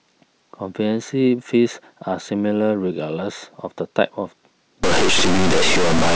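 From 4.84 s to the end, the speech turns harsh and grainy, with distortion that shifts as the voice moves. This is low bit depth without dither. The signal was likely truncated to about 3 bits. The error tracks the sound, reaching roughly the level of the speech itself.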